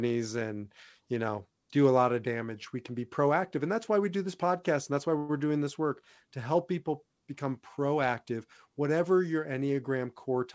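A speech clip carried over a G.722 call path, so nothing sits above 8 kHz. Between 5.18 and 5.39 s, right after "podcast and that's why", there's a call audio freeze: about 108 ms of the last sound stretched out as a fading buzz or hiss, likely from a jitter buffer running dry. Then from 9.99 to 10.46 s, after "become proactive whatever your", a jitter buffer speed-up trims a few tens of milliseconds of pitch periods, so it runs about 7% fast at unchanged pitch.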